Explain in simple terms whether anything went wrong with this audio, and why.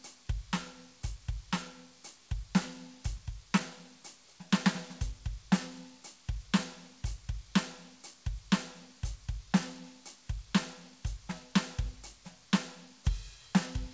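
Nothing went wrong that can be heard: the music came through an ordinary WebRTC call path, which leaves it without the very highest tones above 8 kHz, and on listening nothing else stood out.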